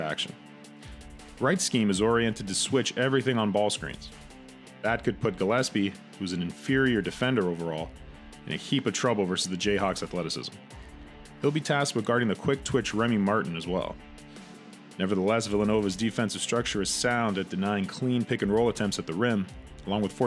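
No faults can be heard anywhere in the clip.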